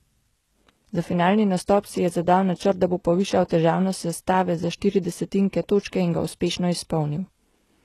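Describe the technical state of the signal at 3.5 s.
At 3.49 to 3.51 s, between "načrt da bo povišal" and "težavnost sestave za štiri", there is pre-echo. A sharp attack sits late in a codec block. The quantisation noise spreads across that block and fills the quiet gap before it. A brief hiss of about 20 ms leads in, and the attack sounds softened.

Underneath, the speech carries plainly audible damage, likely from HE-AAC compression. It fits a low bitrate near 16 kbps. Nothing sounds above 12.4 kHz. The treble is rebuilt from copied lower bands, so sibilants come out gritty and metallic.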